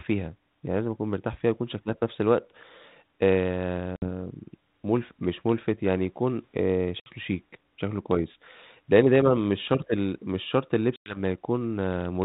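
Speech on a narrowband call, with light ADPCM coloration that fits G.726 at 32 kbit/s. Three abrupt, hard-edged dropouts cut in at 3.96 s, 7.0 s and 10.96 s: about 60 ms, 60 ms and 100 ms of silence, and after each one the speech comes back slightly distorted before it settles. This is packet loss on an ADPCM call. A few packets, around five in the last gap, went missing, so the decoder's adaptive predictor and step size drifted from the sender's and needed tens of milliseconds to resynchronise.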